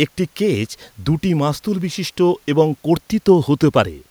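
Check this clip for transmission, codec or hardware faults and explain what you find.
No faults can be heard anywhere in this speech recording. There is nothing further to report.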